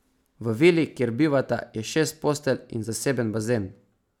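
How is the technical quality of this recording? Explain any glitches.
No technical faults can be heard anywhere in the recording; the signal stays continuous and intact throughout.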